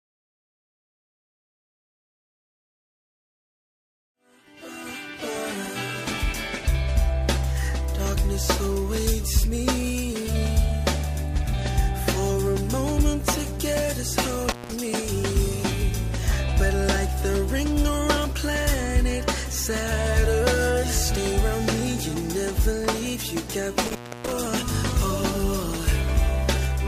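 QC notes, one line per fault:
14.50–14.72 s and 23.82–24.32 s, intermittent contact: The sound drops out twice. Each event is a loose cable or plug briefly losing connection. The line stays open for about 174 ms in the first event and about 291 ms in the second, so the second gap is longer. The contact scrapes as it opens and closes, which puts crackle at the edges of each dropout. Both events are well after the smooth fade-in that ends at 5.6 s.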